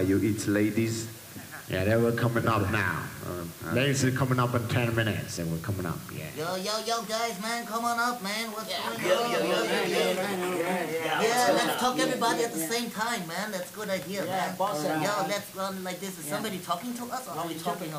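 From start to finish there's a steady, even hiss sitting only about 15 dB under the sound. That's low bit depth with dither: the audio was squeezed down to around 6 bits, with dither added first, so the rounding error comes out as constant white noise rather than harsh distortion.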